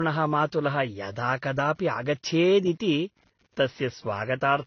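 Throughout the speech, computer activity noise sits underneath: a buzzing pulse train at roughly 100 Hz, around 40 dB below the signal, as computer load disturbs the shared audio ground. The audio also stops dead above 6.6 kHz and carries the layered artefacts of different codecs heard together, likely from transcoding between lossy codecs, consistent with a low-rate AAC-LC encode re-encoded to Vorbis.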